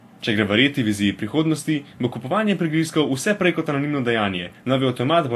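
Speech throughout, with nothing above about 15.1 kHz and two layers of lossy artefacts heard together. This is likely transcoding between lossy codecs: a low-rate Vorbis-style encode re-encoded by WMA 1 at a higher rate, which keeps the lower cut-off and spends bits re-coding earlier smearing.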